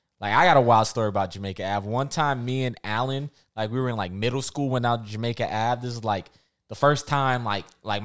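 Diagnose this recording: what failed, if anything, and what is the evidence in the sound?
Nothing in the speech points to a failure at any stage of the chain, from capture through to playback.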